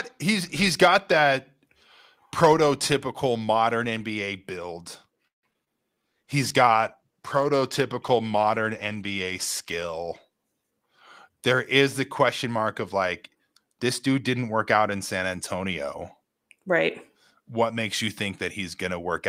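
Right around 5.27 to 5.68 s you get a burst of repeated packet loss, the robotic-sounding kind. Four gaps land in under half a second. The receiver papers over about 190 ms of it by stretching the last bit of sound, the longest gap running 157 ms, and another 60 ms is just gone. Nearly half that stretch is concealment, so it comes out choppy, with bits of the speech dropped.

Then from 6.07 to 10.32 s there's a call bitrate drop. The sound gets coarser and rougher, which fits the encoder being squeezed from 32 down to around 17 kbps after the bandwidth estimate fell. It sits at that low rate for roughly 4.2 s, so the whole passage has that rough, underfed quality. Opus is spending far fewer bits on each frame until things recover.

Last, between 11.29 and 11.83 s, there's a jitter buffer speed-up. The buffer had built up more audio than it wanted, so it trimmed out short pitch-period chunks, around 50 ms in total, over about half a second. 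Playback runs at about 108% speed while the pitch stays put, so that bit of speech sounds slightly rushed, like it's hurrying to catch up.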